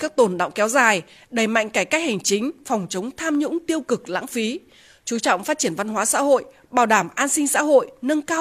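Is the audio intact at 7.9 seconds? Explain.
Yes, at 7.9 seconds the audio is intact, with no dropout, click, distortion or other fault audible at that moment.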